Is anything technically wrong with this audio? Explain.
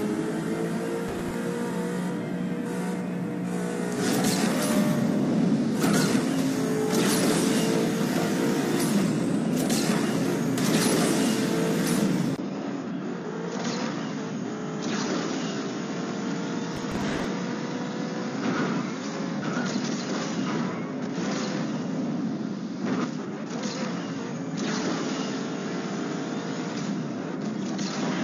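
Yes. Processor overload crackle at 1.08–1.34 s and 16.75–17.25 s: roughly 5 ms buffers miss their deadlines in a run, replaying stale audio as gritty tearing. Unlike isolated clicks, it forms a burst.

Input switched to a poorer device at 12.36 s, likely: a 20 ms silence, then the sound stays duller to the end, with nothing above 7 kHz, about 5 dB quieter, plus new faint noise.

Compressed frames skipped at 12.91–12.95 s (two 46.4 ms frames, about 100 ms lost) and 26.85–26.90 s (one frame): the audio jumps ahead.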